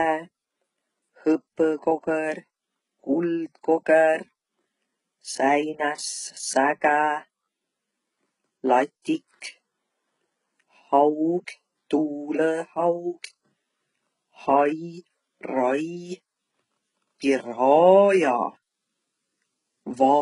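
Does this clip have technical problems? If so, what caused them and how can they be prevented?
Yes. HE-AAC compression likely causes heavy damage throughout the speech: treble above 11.1 kHz is gone, and s sounds turn gritty and metallic rather than merely dull, as plain low-pass would. Encoding at a higher bitrate prevents it.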